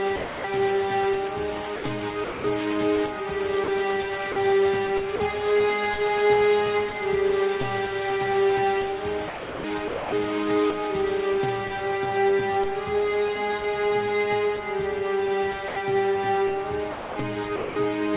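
Sound dropped by the voice detector at 0.16 to 0.44 s: the sender's voice detector likely judged the sound to be background and stopped sending, so 280 ms gives way to steady comfort noise before the audio returns. Sound chopped by the voice detector from 1.76 to 2.44 s: transmission likely switches on and off repeatedly, with 280 ms replaced by comfort noise, leaving the sound choppy. The same dropping recurs as brief 40 ms gaps filled with noise at 3.64 to 3.68 s, 4.32 to 4.36 s and 5.16 to 5.20 s. Chopping returns from 9.28 to 10.12 s, where 600 ms is swapped for comfort noise. An 80 ms drop follows at 15.68 to 15.76 s. A final chopped stretch runs from 16.92 to 17.76 s, with 440 ms replaced. All of this sits within the narrow 4 kHz band of the G.711 call path.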